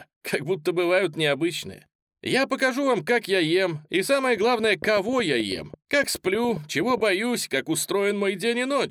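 From 4.37 to 7.01 s a train of clicks runs over the sound: around thirty similar pops at about 10.3 per second, unevenly spaced, peaking a few dB above the signal. Likely interference or a faulty connection. On a spectrogram they show as thin broadband vertical lines; the waveform shows sharp spikes.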